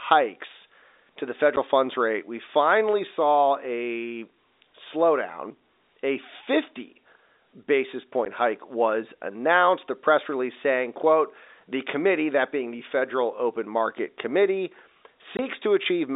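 At 1.56 s, between "to the" and "funds rate we finally", and at 8.25 s, before "hike was announced", packet loss filled with silence leaves 10 ms holes, then 20 ms at 15.37–15.39 s, which fits 10 ms packets. Each shows as a flat waveform gap and a blank spectrogram strip, with hard edges.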